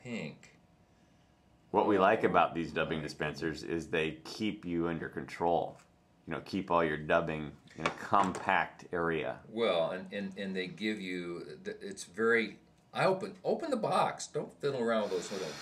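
No technical faults are audible anywhere in the clip.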